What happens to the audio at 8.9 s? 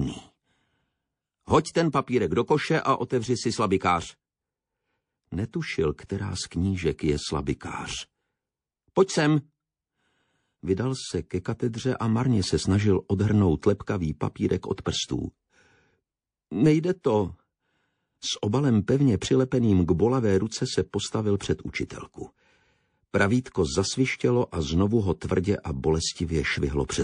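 At 8.9 s you're hearing the same thing that runs through the whole clip: watery, swirly texture with chirpy, metallic highs and smeared attacks, likely MP3 compression at a low bitrate, consistent with around 40 kbps, where weak frequency lines flicker between frames.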